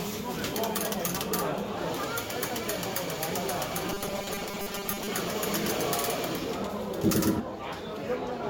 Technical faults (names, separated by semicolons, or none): transcoding between lossy codecs; robotic sound from repeated short buffers; doubled audio track